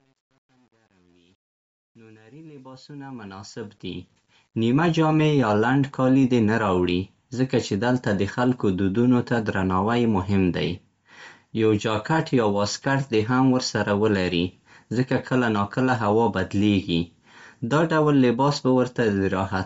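From the start to 4.9 s, the speech fades in, and that rising level carries truncation distortion on a fade. The gain stage keeps too few bits and adds no dither, which fits roughly 9-bit resolution. Up to about 3.43 s the quiet waveform collapses into coarse steps, so it grits rather than hissing evenly as dither noise would.

Throughout, the speech has a grainy, breathy edge. Nothing is present above 7.7 kHz, and the upper band sounds noise-filled rather than simply dull. That points to Bluetooth LC3 compression, likely at around 32 kbps with 10 ms frames, which sets it apart from a plain low-pass filter.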